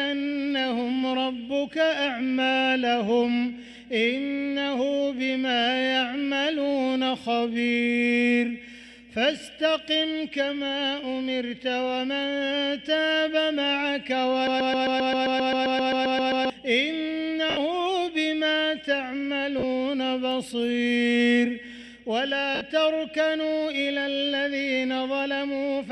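A broken-record loop runs from 14.47 to 16.50 s: a 132 ms fragment repeats back to back 15 times, likely a stalled player resending its last buffer while the intended audio is lost. Lost LE Audio frames follow at 17.50 s for 70 ms, 19.59 s for 40 ms, and 22.55 s for 60 ms, where the LC3 decoder refills the gaps from the previous spectrum, turning tones into a brief noisy smear.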